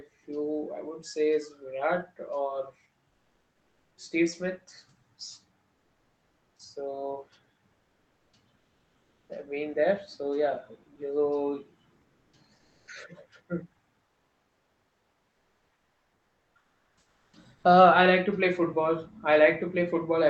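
From 3.09 to 3.97 s, the pauses in the speech lose their real background. A steady, featureless hiss takes its place. This is comfort noise in place of the background. It is about 2 dB quieter than the true room sound, which sits about 49 dB below the loudest speech. The likely cause is discontinuous transmission in the Opus codec. The sender stops sending during silence, and the receiver synthesises noise instead. The same swap happens from 5.73 to 6.59 s, about 1 dB quieter. It happens again from 7.73 to 9.29 s, ending just before "I've been there". It follows "yeah you" from 12.01 to 12.87 s. The longest stretch runs from 14.05 to 17.63 s.

Near the end of that stretch, from 17.29 to 17.33 s, 40 ms of the returning speech is missing. This is an onset clipped by the voice detector. The sound begins abruptly, without its soft start. The detector was likely slow to notice that speech had resumed, so comfort noise covered those first moments. 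Throughout, the call path's Opus coding at 20 kbps limits the audio to 8 kHz.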